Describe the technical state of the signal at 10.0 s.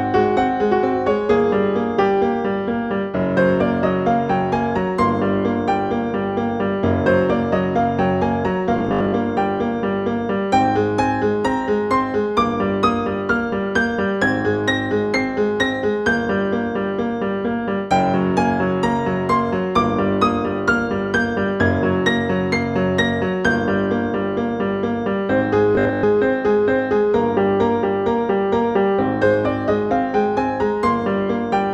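At 10.0 s the signal is intact, with no audible fault at that moment.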